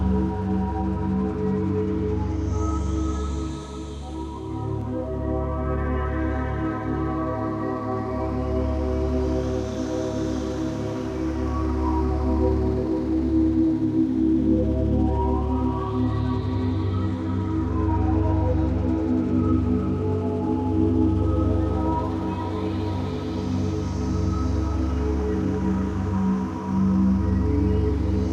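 At 4.81 s there is a block of digital silence lasting about 1.3 ms, which fits a 64-sample block. The output was replaced by zeros, either because the buffer wasn't filled in time or because a calculation produced invalid values. At this length it is heard as a tick or dip, not as a gap. The sound drops out and returns with no fade, which sets it apart from a dropout that ramps down and up.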